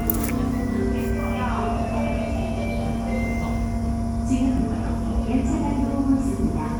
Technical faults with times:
none

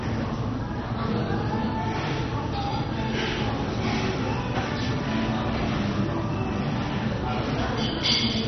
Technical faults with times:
0.00-8.48 MP2 compression

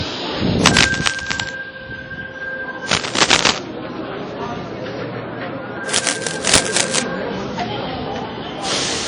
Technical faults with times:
0.00-9.07 WMA compression
0.60-1.50 cable scratch noise
2.88-3.59 cable scratch noise
5.88-7.00 cable scratch noise

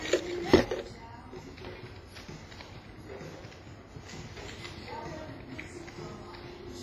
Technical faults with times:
0.00-6.83 WMA compression

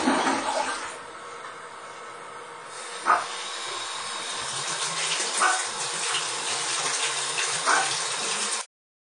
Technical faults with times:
0.00-9.02 WMA compression
8.61-9.02 cut-off end

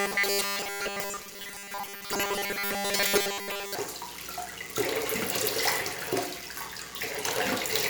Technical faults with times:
0.01-3.75 robotic sound from repeated short buffers

